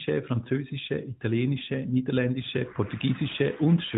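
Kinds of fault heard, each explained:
No kinds of fault are heard in this speech clip.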